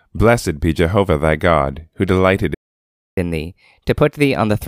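Speech, interrupted by a playback stall from 2.54 to 3.18 s: the sound halts mid-flow and the output stays silent for about 0.63 s. The likely cause is the player running out of buffered data or having its audio thread blocked. Unlike a brief dropout or click from a lost packet, this gap lasts well over half a second, and the audio does not continue unaffected afterwards. From 3.18 s to the end at 4.68 s comes catch-up at higher speed. The player works through its backlog about 1.15 times faster by resampling, so tempo and pitch rise together, by roughly two semitones. Because tempo and pitch move as a pair and the change starts right where the silence ends, this is catch-up after the stall rather than a pitch-shift effect or a time-stretch. The faster playback does not return to normal speed before the clip ends.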